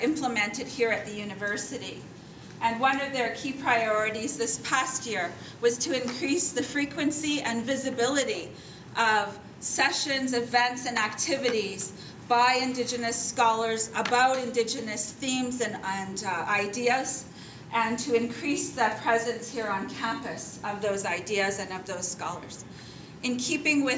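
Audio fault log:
No faults are heard anywhere in the audio. The call microphone processing is audible in the trimmed lowest bass and the lack of content above 8 kHz, as expected for that path.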